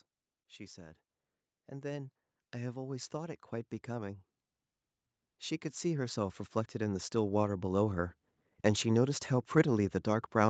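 Speech with automatic gain rising twice: from 1.69 to 4.29 s the level swells by about 8 dB, and from 5.8 to 7.77 s by about 7 dB, voice and background together. On a waveform the envelope widens steadily, and the spectrogram brightens evenly below its 8 kHz call-band ceiling.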